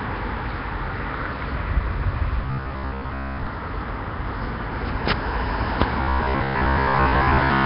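From the start the whole clip has a rough, hissy halo and a smeared, underwater feel, with nothing above 5.3 kHz. That's likely Nellymoser compression at a starved rate, around 22 kbps.

Between 2.42 and 3.47 s, and again from 6.01 to 7.65 s, the sound turns into a rigid metallic buzz at 66.7 Hz. That's robotic sound from repeated short buffers: about 15 ms chunks looping over most of the real audio, likely from late-arriving data.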